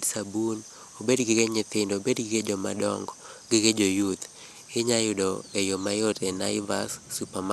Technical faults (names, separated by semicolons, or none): MP2 compression